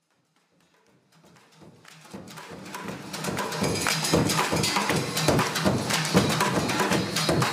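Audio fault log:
Nothing stood out on listening, with the smooth fade-in settling to full level by about 3.8 s.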